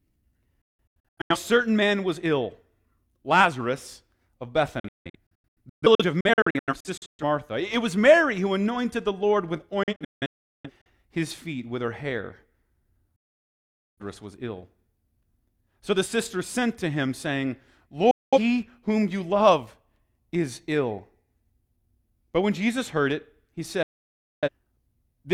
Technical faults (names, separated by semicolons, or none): digital broadcast dropout